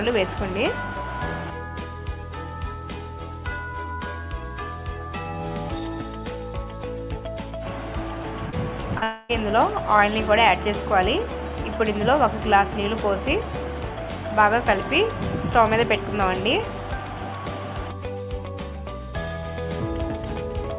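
Call audio band-limited to nothing above 4 kHz, consistent with a G.711 A-law path at 64 kbps, carries three bursts of short concealed packet loss at 8.50–8.54 s, 8.80–8.87 s and 8.98–9.04 s. Each gap of about 20–40 ms was patched by extending the preceding sound, and the result is a brief smear or wobble. Immediately after, from 9.04 to 9.31 s, the audio turns into a fading synthetic continuation of the last sound for about a quarter second with no true silence, likely a long network dropout in which roughly 260 ms never arrived and was concealed rather than played.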